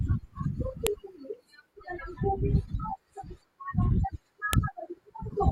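At 0.87 s and again at 4.53 s the speech is cut through by a sharp, loud snap, a file header played as audio. Where separate WAV pieces were joined without stripping their headers, those few dozen bytes of header data play as samples, so each seam gets a brief burst. Unlike a splice click or dropout, the snap ignores the level and shape of the surrounding speech, landing hard at each join.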